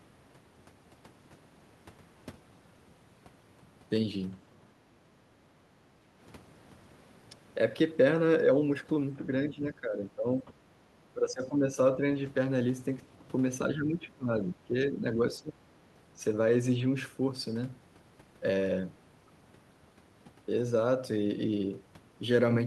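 Background gated by the echo canceller at 5.08 to 5.17 s: the canceller clamped the microphone while the loudspeaker played, dipping the room sound by about 7 dB. Speech suppressed in double talk at 9.16, 9.49 to 10.52, 11.13 to 11.77, 11.95, 13.74 to 14.3, 14.54 to 15.04 and 15.39 to 15.58 s: the speech dips or breaks up, sometimes deeply, likely because the canceller confused it with far-end echo.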